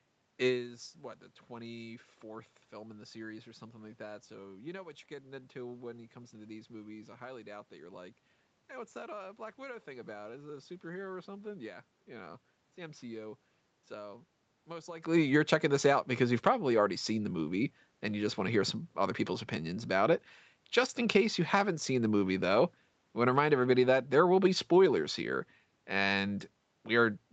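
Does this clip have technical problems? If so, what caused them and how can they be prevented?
No, there are no technical problems here. The speech passes through a call path whose audio stops at about 8 kHz, with some room noise and level shifts near the start and again around 15 s as the talker moves.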